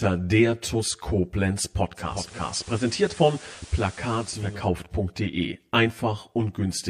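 Throughout the speech there is a hollow, phasey colour with fixed notches in the spectrum, the first one low, around 40 Hz. This is channel delay (comb filtering): one channel lags by about 10 ms, and summing to mono cancels shared content at evenly spaced frequencies.

From 1.94 s to 4.69 s, hiss rises to about 20 dB below the speech, and the level drops by about 2 dB. This is digital radio blending to analogue. The receiver lost its digital signal and cross-faded over roughly half a second to the station's FM broadcast, then blended back.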